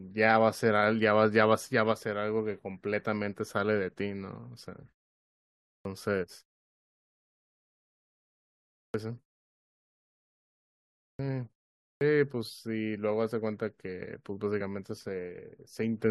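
Clipped starts after a pause occur in this speech recording at 5.81, 8.9, 11.15 and 11.97 s. Each time, roughly 40 to 43 ms of the onset is missing, so speech bursts abruptly out of silence without its first sounds. The preceding gaps run from 0.5 s to about 2.5 s, long enough for the output device to drop into a low-power state. It must then wake or relock before it passes audio, and the opening of the returning sound is lost in that time. Damaged data in the compressed stream appears at 14.6 s as a brief blip or chirp. Corrupted or missing bytes there throw the decoder out of sync, it misreads the frame, and it skips ahead to the next valid frame header.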